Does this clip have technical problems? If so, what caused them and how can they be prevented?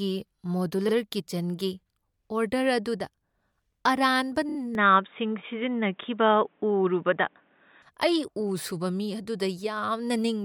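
Yes. Repeated frames: a run of compressed frames was written or sent more than once. At 0.88 s a 52 ms block plays twice. At 4.48 to 4.56 s a 26 ms block plays three extra times, adding about 78 ms, heard as a short stutter. Checking frame sequence numbers or timestamps and discarding duplicates before decoding would prevent this.

Input switched to a poorer device: the recording input likely changed mid-stream to a lower-grade microphone. From 4.75 to 7.82 s the speech turns dull and boxy, with nothing above 3.8 kHz, a level shift of roughly 5 dB and a faint new noise floor well below the speech. Locking the input device and disabling automatic device switching during recording would prevent this.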